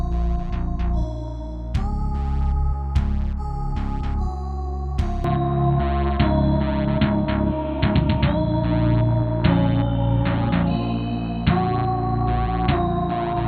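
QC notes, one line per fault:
5.24 s to end: input switched to a poorer device, likely. The sound abruptly loses everything above 4.3 kHz and picks up a fresh noise floor roughly 35 dB down, with no gap and no level jump. Unlike a plain filter, the bandwidth and background change together.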